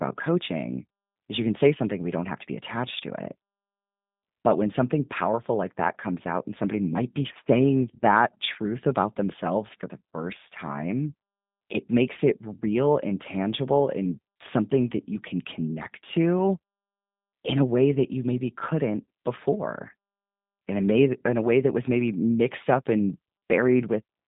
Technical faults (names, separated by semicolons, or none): G.729 codec